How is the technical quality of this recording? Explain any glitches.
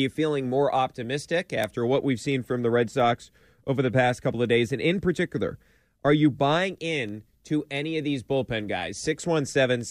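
The recording has one recurring technical fault. Word clock ticks run through the speech from 0.28 s to 9.81 s: around fifteen sharp ticks of uneven strength, spaced roughly 0.7 seconds apart. A receiving device clocked independently of its sender drifts by a few tens of parts per million, slipping one sample at each crossing. The steady spacing is what separates these ticks from random clicks or dropouts.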